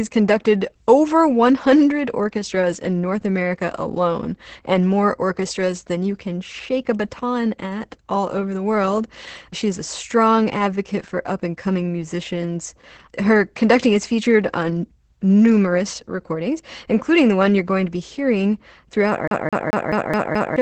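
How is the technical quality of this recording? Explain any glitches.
The recording is heavily compressed throughout and ends with a skipping glitch.

For the whole clip, the speech sounds muffled and slightly hoarse, with a faintly robotic edge, and nothing reaches above about 8.8 kHz. This is Opus voice compression running its SILK linear-prediction coder in wideband mode, with damage heavy enough to point to a rate around 10 kbps. At that rate the excitation is coded coarsely in 20 ms frames and the top of the band is discarded.

From 19.28 to 20.56 s, just after "to be hearing throughout", the audio stutters in a fast, even loop. A 0.21 s fragment replays six times with a brief mute at each jump. This is a CD stuck on one turn. A scratch knocks the laser back one track at the same point on every revolution, so the same short slice repeats until the read gets past it.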